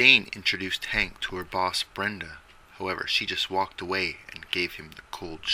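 Nothing in the signal points to a technical fault at any point.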